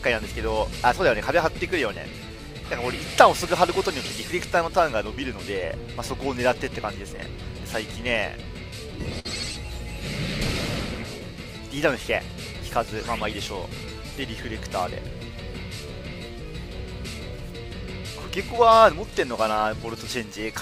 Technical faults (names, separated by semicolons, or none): burst of packet loss